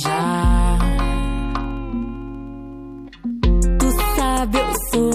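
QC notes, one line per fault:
1.39–3.37 s, periodic USB or driver dropouts: a steady train of ticks every 64 ms, about thirty in all, heard only under signal. Something blocks the audio path at a fixed interval, and each time a sliver well under a millisecond is skipped, leaving a tiny splice.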